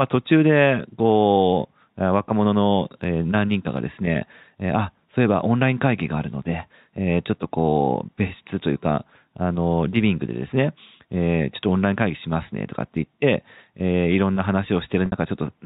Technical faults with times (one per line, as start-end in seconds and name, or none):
15.06-15.12 packet loss with pitch repetition